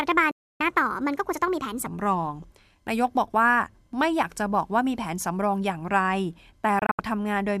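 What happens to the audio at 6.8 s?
A digital broadcast dropout hits the speech from 6.79 to 6.99 s. The receiver stopped getting valid frames, most likely from signal loss or failed checksums, and muted until clean data resumed. Rather than one gap, the audio breaks into several short holes adding up to 120 ms across roughly 190 ms, the longest lasting 72 ms, which points to a handful of lost frames. Each mute arrives through a very quick fade of about 3 ms, so the cuts sound abrupt. Whatever was transmitted in those holes is gone.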